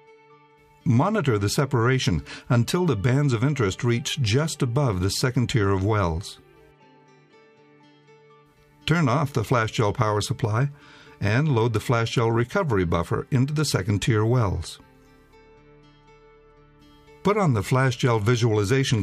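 No technical faults can be heard anywhere in the signal.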